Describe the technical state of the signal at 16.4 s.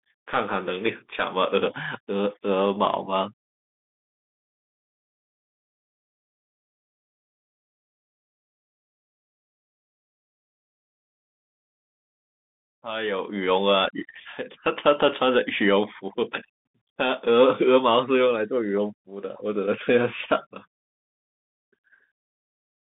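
At 16.4 s the speech carries the Bluetooth CVSD headset codec, present for the whole clip rather than a local event. The codec encodes each sample as a single up-or-down bit with an adapting step size, consistent with a 64 kbps stream. The line is confined to roughly 200 Hz to 3.6 kHz with nothing above 3.8 kHz, so the sound is thin and muffled. The codec damage is plainly audible as scratchy sibilants, granular hiss and slope-overload distortion on loud bright passages.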